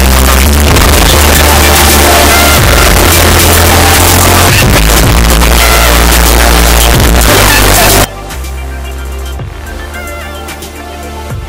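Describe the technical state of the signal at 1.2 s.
At 1.2 s the signal is a very loud, harsh distortion in which quiet passages are as loud as everything else, running from the start to 8.04 s. The likely cause is signed and unsigned mixed up: 8-bit samples read with the top bit flipped, so every zero crossing jumps across the whole range.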